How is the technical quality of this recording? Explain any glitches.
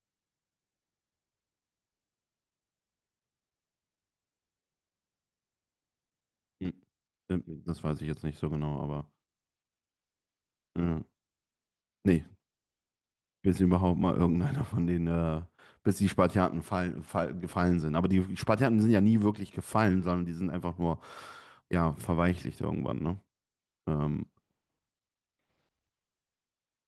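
The recording has no technical glitches to explain. At no point does the speech break up, drop out or lose its continuity.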